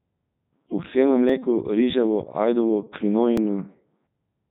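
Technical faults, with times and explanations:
Throughout, Codec 2 vocoder: the speech has been reduced to pitch, voicing, energy and a coarse spectral envelope, and then rebuilt from sine waves instead of the original waveform. The damage is heavy, even at Codec 2's highest 3.2 kbit/s mode. The voice comes out robotic and buzzy, with a synthetic timbre. Nothing is present above about 4 kHz, so the top end sounds dull and the consonants lack crispness.
1.29 s and 3.37 s, dropped buffer (overrun): at each point the sound makes a tiny jump where the audio skips forward instead of pausing. The likely cause is that the capturing program fell behind and the hardware overwrote a block of samples before they were read. Only a very short piece, around a millisecond or two, is lost each time, so no syllable goes missing.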